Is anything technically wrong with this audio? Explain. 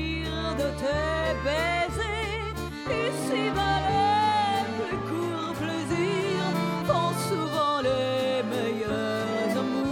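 Yes. A USB whine runs through the whole clip: a steady 1 kHz tone, roughly 40 dB below the signal. Current drawn in the bus's 1 ms frames leaks in through power or ground, giving a fixed-pitch whine that shows as a thin, unbroken horizontal line at 1 kHz on a spectrogram.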